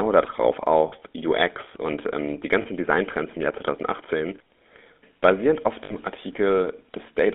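GSM full-rate codec runs throughout the speech. It models the vocal tract and drives it with a sparse, regularly spaced pulse excitation, which gives a plainly audible buzzy, gravelly roughness. The line passes only about 250 Hz to 3.6 kHz, which fits 13 kbps full-rate coding.

Lost GSM frames occur at 0.88 to 0.93 s, 2.62 to 2.67 s and 5.84 to 5.94 s, lasting 40, 40 and 60 ms. Each gap is filled by repeating the last good frame's settings, heard as a brief rough, metallic ring. The lengths fit two, two and three 20 ms frames.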